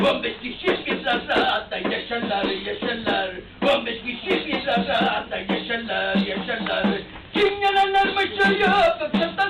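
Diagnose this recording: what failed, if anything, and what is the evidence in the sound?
Nothing failed; no faults heard.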